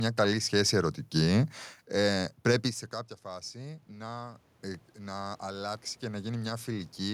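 Automatic gain rising from 3.24 to 7.09 s, after "ε πρέπει σε κάποια": the talker moved away around 2.5 s, the level fell about 16 dB, and the gain control slowly raised voice and room noise together by about 8 dB, recovering only half.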